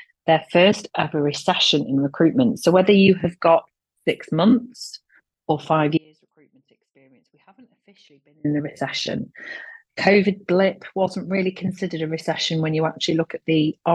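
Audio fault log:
5.98–8.44 s, audio dropout to a faint residue: the sound cuts out abruptly, leaving only a faint leak, likely lost signal with the path still live.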